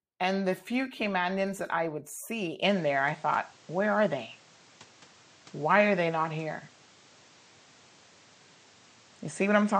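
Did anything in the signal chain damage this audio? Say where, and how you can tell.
Yes. Input switched to a poorer device at 2.62 s, just after "that I would see". From there on, nothing remains above 8.8 kHz, level shifts about 5 dB, and a new noise floor sits roughly 30 dB down, with no gap. The capture stage likely changed microphones.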